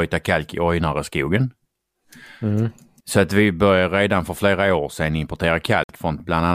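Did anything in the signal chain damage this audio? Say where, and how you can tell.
Yes, near the end of this speech clip, from 5.83 to 5.89 s, there's a hole of about 60 ms where the sound just cuts out. That's likely a Bluetooth dropout on the wireless playback link, with a few packets missing, before the audio resumes further along.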